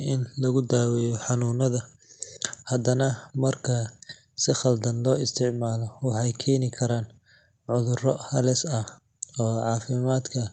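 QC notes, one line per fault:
No faults detected.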